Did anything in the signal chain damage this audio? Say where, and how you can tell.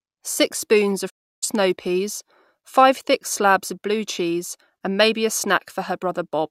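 Yes. A digital broadcast dropout runs from 1.08 to 1.44 s, between "spoons of" and "snow peas five thick", at the reception and decoding stage. The speech fades out over about 20 ms and then falls silent for roughly 320 ms. The receiver stopped getting frames that passed their error check and muted its output until valid data returned, which points to a run of consecutive corrupted frames. The programme content sent during that gap is gone, not just masked.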